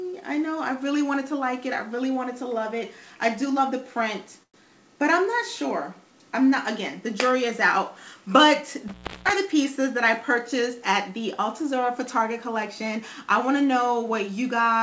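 Audio carried over a call path whose codec, consistent with G.722 at 64 kbps, leaves nothing above 8 kHz has three kinds of fault. At 4.43 to 4.57 s a call audio freeze occurs, likely from delayed packets draining the jitter buffer: the last sound is stretched into a fading buzz or hiss, then about 90 ms of silence, before the audio resumes where it stopped. At 8.88 to 9.31 s an intermittent contact opens for about 317 ms, cutting the sound out with crackle at both edges and faint hiss between. Jitter buffer speed-up follows at 9.77 to 11.20 s and again at 11.61 to 13.24 s, as the receiver trims repeated pitch-period pieces, roughly 50 ms and 70 ms in total, so the audio runs about 3% fast at unchanged pitch.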